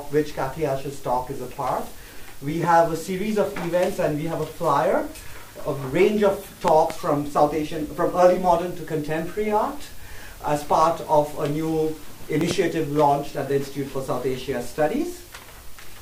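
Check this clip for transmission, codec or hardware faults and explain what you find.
The clip has one kind of fault, a loud pop, at three moments. A sudden voltage step, likely from a plug, switch, static or driver glitch, enters the signal and is shaped by the circuits after it. It sounds like a sharp pop or thump over the continuing audio. There is a single pop at 2.64 to 2.66 s, about 10 dB above the sound. A pair of pops comes at 6.68 to 6.93 s, peaking about 20 dB above. Another pair comes at 12.41 to 12.53 s, about 15 dB above.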